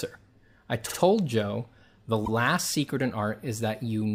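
Speech with repeated frames: a 48 ms block replays twice more at 0.88–0.97 s and once more at 2.25–2.29 s, just before "secret in", consistent with two compressed frames being sent again. The exact copy stretches the timing, unlike a dropout's gap or an echo's decaying tail.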